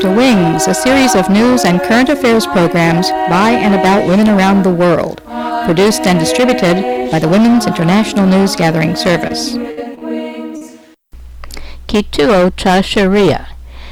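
From start to finish every loud moment carries a harsh, gritty fuzz, with the tops of peaks sounding crushed rather than rounded. This is hard clipping: the signal was driven about 14 dB past what one stage in the chain could pass, so its peaks were sliced flat. Roughly one sample in seven sits on that ceiling, and the squared-off waveform sprays added harmonics high into the spectrum, which is the source of the constant rasp.

At 9.27 s comes the first of four brief smears, a short wobble where the sound seems to stall for an instant before carrying on. This is short concealed packet loss: about 20 ms of audio never arrived in time, and the receiver bridged the hole by extending the preceding sound before blending back into the real signal.

From 9.71 to 9.79 s the sound freezes into a held, dwindling tone or hiss, then resumes slightly further on with a piece skipped. This is a burst of packet loss: about 60 ms went missing in one run, too long to hide cleanly. 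The receiver kept repeating the last sound while fading it, and about 57 ms of the gap was filled that way before real audio returned past the missing stretch.

Short concealed packet loss then returns as two back-to-back smears at 9.95 and 9.99 s, each about 20 ms missing, heard as a slightly longer stutter. Another comes at 10.57 s, about 40 ms missing and patched over.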